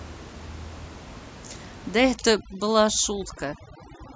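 From 2.16 s to the end of the clip, overdone noise removal takes hold. The noise reduction is set too aggressively, so individual frequency bands that sit close to its noise estimate are pulled far down or gated off entirely. The room noise, about 18 dB below the speech, collapses into near silence scattered with twinkling specks, and the quieter components of the speech are stripped out with it.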